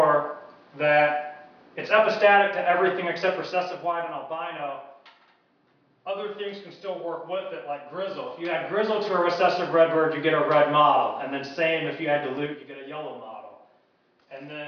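Level changes are being applied in coarse steps with no smoothing between them, so each jump leaves a small click, a fault known as zipper noise. From 3.33 to 4.27 s the level drops by around 15 dB in 1 dB steps, roughly ten per second. It rises by a similar amount from 8.02 to 9.30 s, and from 12.37 to 12.72 s it falls by around 10 dB in 3 dB steps, so the ticking there is coarser.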